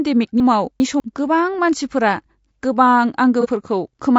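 Low-delay AAC compression runs from start to finish. The speech sounds rough and grainy, with a hiss filling the gaps between the voice's harmonics and an upper band that sounds thin and partly synthetic. The likely cause is AAC-ELD, the low-delay coder used for video calls, at a rate around 32 kbps. Its short frames cannot separate closely spaced pitch harmonics, and at that rate too few bits remain to code them cleanly, so the damage is plainly audible.

Chunks out of order appear from 0.4 to 1.0 s. A 200 ms stretch of audio arrived late and plays two chunks after where it belongs, behind the audio that should have followed it. No audio is missing, but the sequence is scrambled across 600 ms. The result is a jumbled, garbled moment with three hard joins.

AAC frame loss with concealment occurs between 3.41 and 3.47 s. The sound points to a single lost frame of about 30 ms. The decoder covered the gap by reusing the last good spectrum with randomised phase or interpolated energy. 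Because the gap is short, the concealment does not fade to silence. Instead it leaves a brief smeared, noisy or phasey patch where the signal blurs before clean decoding resumes.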